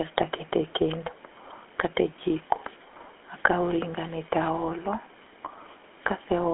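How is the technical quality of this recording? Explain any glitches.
The speech has been passed through the GSM full-rate codec for its whole length, and the damage is plainly audible. The codec rebuilds the voice from a vocal-tract model driven by coarse pulse excitation at a rate that fits 13 kbps, inside a line band of roughly 250 Hz to 3.4 kHz. The result is a buzzy, gravelly roughness on the voice, thin low end, and nothing bright or airy above 3.4 kHz.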